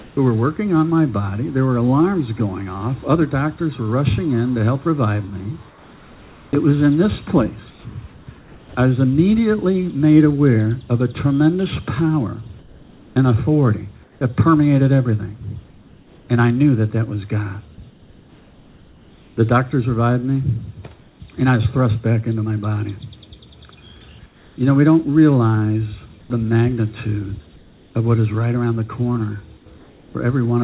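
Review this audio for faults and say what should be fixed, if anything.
Comfort noise in place of the background appears at 0.0–0.17 s, 5.69–8.75 s, 12.59–19.37 s and 24.26–30.14 s. In the pauses within these spans, which total about 0.17, 1.5, 2.9 and 1.2 s, the real background, about 29 dB below the loudest sound, is replaced by a steady, featureless hiss. The change is likely caused by discontinuous transmission, with the receiver synthesising noise while the sender stays silent. At the start the level matches, so only the texture changes. To prevent it, disable discontinuous transmission or use a comfort-noise model that tracks the background's spectrum more closely.

Sound dropped by the voice detector occurs at 17.75–17.78 s, inside the third comfort-noise span. About 20 ms of sound is lost and replaced by 30 ms of steady noise, likely because the sender's detector misread that sound as background and briefly stopped sending. 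The whole clip is band-limited at 4 kHz, consistent with a 64 kbps G.711 A-law call path. To prevent it, lower the voice detector's threshold or lengthen its hangover time.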